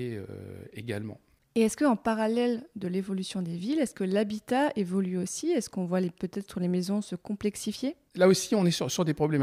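No technical faults can be heard anywhere in this speech recording. Nothing in the audio stands out as a problem that needs attention.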